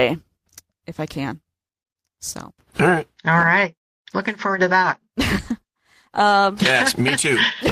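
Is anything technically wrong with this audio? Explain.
Yes. A call bitrate drop runs from 5.46 s to the end of the clip. The bandwidth estimate fell, so the encoder went from 32 kbps down to 17 kbps, staying at its lowest for 1.28 s. With fewer bits the speech is coded more coarsely and sounds rougher and more watery.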